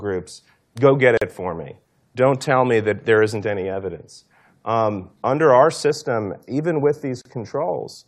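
In this speech clip, the sound drops out for about 41 ms from 1.17 to 1.22 s, just before "it for me", and again for about 37 ms from 7.22 to 7.25 s. These repeat 6 s apart, the signature of a gap at a join of encoded pieces, where each separately encoded segment kept its encoder delay and last-frame padding. From 5.90 s to the end, just after "under our", the speech turns hollow and phasey, with a fixed notch around 3 kHz. This is channel delay (comb filtering): one channel lags the other by a fraction of a millisecond, so summing them to mono cancels evenly spaced frequencies.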